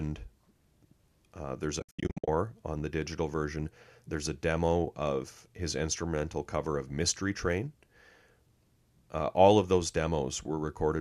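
AAC frame loss with muting hits this speech recording between 1.80 and 2.28 s. Most of that 480 ms stretch, about 380 ms, went missing in scattered gaps, the longest roughly 70 ms, which fits many short frames of the kind used by the low-delay AAC that likely carries the audio. The decoder zeroed each lost frame, so the overlapping windows fade the sound out and back in, leaving soft-edged holes.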